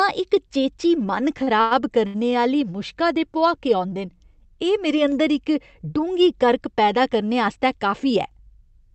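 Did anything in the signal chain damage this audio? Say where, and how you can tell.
Yes. Three short stalls from late packets sit at the network and jitter-buffer stage, at 1.43, 1.61 and 2.07 s. The speech holds on one sound for 38, 98 and 70 ms, with a slight buzz or dip, then resumes where it left off. The buffer ran dry and stretched the last audio until each packet arrived.

A jitter buffer speed-up runs from 7.52 to 8.94 s, also in the buffer of the Opus call path. The speech plays about 7% fast at unchanged pitch and sounds hurried. The receiver trimmed pitch-period slices, roughly a tenth of a second in total, to shed excess buffered delay.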